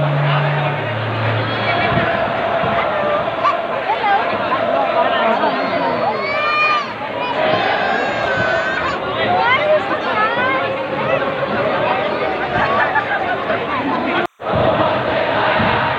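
Timecode bleed runs throughout: leaked 30-frame linear timecode adds a chirping warble about 40 dB down, seen as steady spectrogram bands near 1 and 2 kHz.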